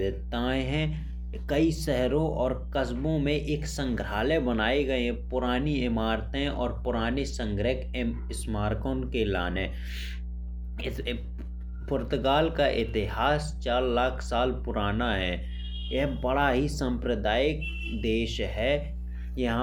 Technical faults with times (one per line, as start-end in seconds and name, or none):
0.00-19.62 mains hum